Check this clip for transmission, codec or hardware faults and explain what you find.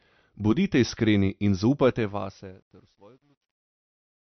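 Two faults are audible, one running through the whole clip and one affecting its end.

MP3 compression, throughout: the treble is cut with nothing above 6.1 kHz, and plainly audible watery, swirling artefacts colour the speech. This is likely a low-bitrate MP3 encode, around 48 kbps, where the encoder drops weak frequency lines that flicker between frames.

Truncation distortion on a fade, from 1.88 s to the end, just after "iskreni in": the fade was computed without dither at a depth that points to about 10 bits, so the quietest part of the waveform collapses into coarse steps. It sounds gritty, worst from 2.61 s to 4.24 s.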